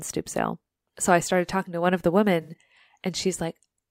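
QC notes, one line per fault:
2.42–2.63 s: AAC frame loss with concealment. About 107 ms of audio is missing in gaps spread over 213 ms, the longest around 70 ms, which fits five lost frames. The decoder rebuilds each gap from the last good spectrum, leaving a smeared, phasey patch in the speech.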